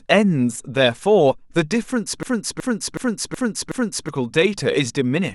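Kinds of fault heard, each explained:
System hang loop: the driver froze while the hardware replayed one 0.37 s buffer five times, giving a 2.69 Hz stutter of identical repeats rather than silence.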